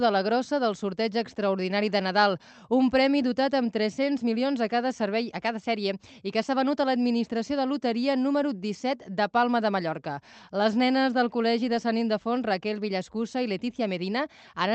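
No technical faults are audible anywhere in this audio.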